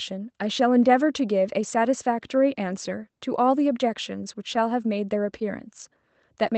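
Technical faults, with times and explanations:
No technical faults detected.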